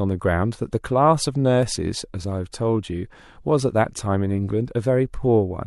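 At 1.63 s the speech jumps, the mark of an overlap between stream segments: the player trimmed about 16 ms of sound it wrongly treated as duplicated. Unlike a dropout, no silent gap appears; the waveform simply skips forward.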